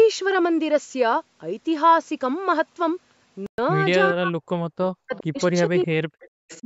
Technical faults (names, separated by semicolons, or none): Bluetooth stall; speech suppressed in double talk; echo leak